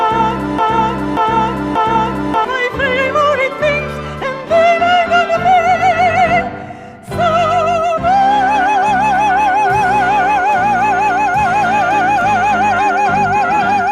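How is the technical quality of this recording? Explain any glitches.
One glitch affects the recording, at the very start. From 0 to 2.45 s, a broken-record loop repeats a 585 ms fragment three times, exactly and without fading as an echo would, likely from a stalled stream.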